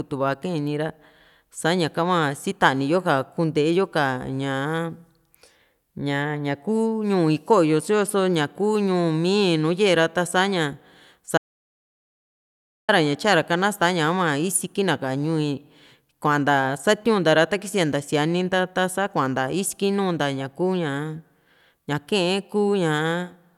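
Speech that cuts to dead, roomless silence from 11.38 to 12.89 s, losing about 1.5 s: an audio dropout to silence, likely from the input disconnecting while recording continued.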